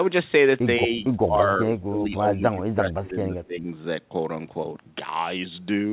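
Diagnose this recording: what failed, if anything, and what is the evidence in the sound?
Speech suppressed in double talk, from 1.25 to 3.69 s, at the call-processing stage. The speech dips by as much as about 20 dB and breaks up for around two seconds in total, most likely because the echo canceller could not separate the near talker from the far side's loudspeaker echo and attenuated both. The narrowband ceiling at 4 kHz throughout points to a G.711-style telephone codec, not to this fault.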